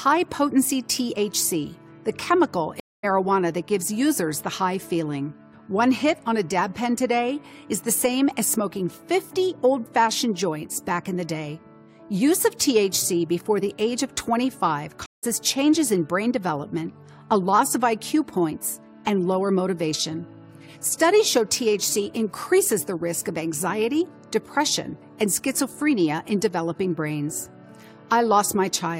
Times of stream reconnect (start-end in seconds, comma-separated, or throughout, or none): 2.80-3.05, 15.06-15.25